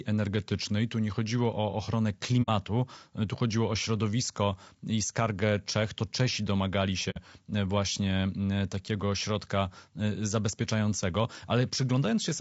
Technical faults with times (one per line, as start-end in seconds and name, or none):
0.00-12.40 low-delay AAC compression
2.42-2.49 AAC frame loss with muting
7.10-7.18 AAC frame loss with muting